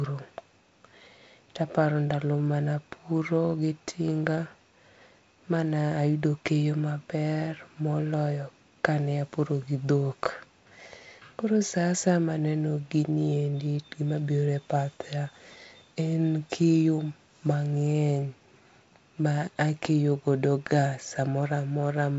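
Nothing stood out on listening to this speech, which comes through G.722 wideband telephone coding with nothing above about 7.7 kHz.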